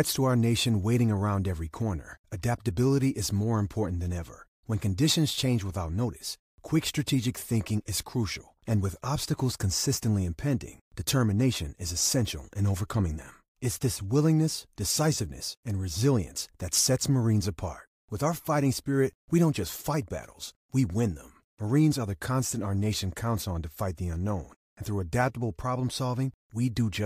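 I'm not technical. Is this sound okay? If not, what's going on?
Yes, nothing wrong can be heard in this recording.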